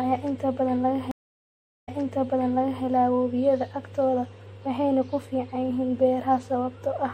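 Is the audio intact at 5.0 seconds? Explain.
No. At 5.0 seconds the speech carries the same damage heard across the whole clip, most likely MP3 compression at a bitrate low enough to suggest about 64 kbps. Short of bits, the encoder discards weak frequency lines, which flicker on and off between frames. The result is a watery, swirling texture with metallic chirps on s sounds. That frame-to-frame flicker is what separates it from a simple low-pass filter, which only dulls the sound evenly.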